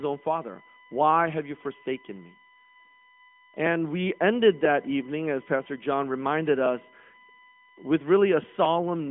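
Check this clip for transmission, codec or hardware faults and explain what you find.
One hardware fault runs through the whole speech clip: USB whine. It sits on top of narrowband phone-line speech.

The whine lasts from start to end. Current drawn by the USB bus in 1 ms frames leaks in through the power or ground. That gives a steady 1 kHz tone and its harmonics, loudest at 6 kHz. It is a fixed-pitch whine, roughly 25 dB below the speech.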